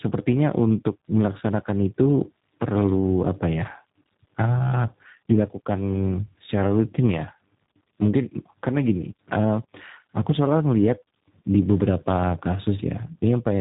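Tandem speech coding runs throughout the speech. The sound points to two speech codecs in a row, fitting G.726 followed by G.729A, the second re-encoding the first's errors. Unlike one narrowband codec, roughness and warble compound, with nothing above 3.8 kHz.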